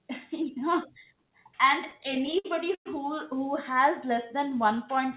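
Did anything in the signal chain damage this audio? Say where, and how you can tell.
Yes. Between 1.88 and 2.87 s, just before "who who has", there are repeated stalls (stutter) from late network packets draining the jitter buffer. Ten times the receiver stretched the last sound to cover the wait, about 255 ms in all and up to 110 ms at once, concealing roughly a quarter of that second. A spectrogram shows ten smeared, repeated frames, with fading tails in the longer waits, and the waveform shows hesitant, restarting envelopes.

From 4.06 to 4.77 s, after "who who has", comes a jitter buffer slow-down. The buffer was rebuilding its reserve, so it repeated single pitch periods, adding about 47 ms and playing that stretch at 94% speed with unchanged pitch. On a spectrogram, harmonics stay level while features stretch sideways. The waveform shows near-identical cycles repeated in a row. Nothing in the call path appears above 4 kHz, consistent with G.711 μ-law.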